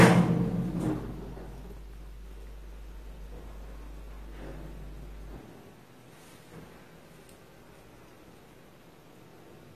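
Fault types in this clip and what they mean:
AAC compression: likely a low-bitrate AAC-LC encode, around 32 kbps, where the coder discards whatever its hearing model judges inaudible. Nothing remains above 14 kHz, so the sound turns dull, and the codec damage is plainly audible as smearing and warbling.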